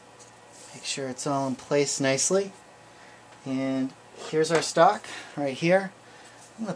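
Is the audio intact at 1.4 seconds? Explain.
Yes, at 1.4 seconds the audio is intact, with no dropout, click, distortion or other fault audible at that moment.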